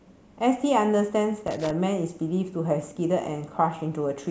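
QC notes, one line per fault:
1.38–1.71 s, loose connector crackle: for about a third of a second the speech breaks into irregular scratching as a worn contact rapidly makes and breaks, chopping the signal. The waveform shows ragged gaps and spikes, and the spectrogram shows scattered broadband vertical streaks.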